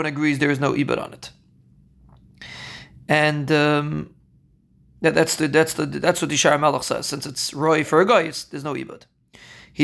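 Listening to the speech in this recording, nothing stood out as a technical problem at any point.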